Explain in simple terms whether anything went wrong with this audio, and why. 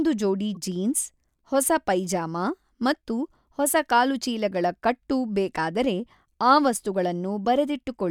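Two brief glitches, at 0.55–0.57 s and 7.45 s, are corrupt frames decoded: damaged compressed data was played anyway, producing a short chirp, squeak, blip or burst of noise.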